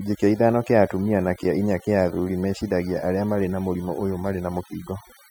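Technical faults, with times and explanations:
Throughout, overdone noise removal: a noise reduction stage was pushed far too hard on a noisy speech recording. It drives individual frequency bands down or off whenever their level sits near its estimate of the noise floor, and the quieter components of the speech fall below that threshold and are removed along with the noise. The background drops and breaks up into twinkling, chirpy specks.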